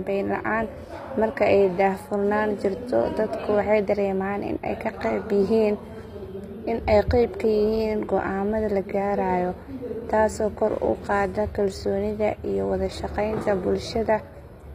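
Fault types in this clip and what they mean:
HE-AAC compression: plainly audible damage, likely from band replication at a bitrate near 24 kbps. The treble stays bright yet synthetic rather than dull, and nothing sounds above 15.4 kHz.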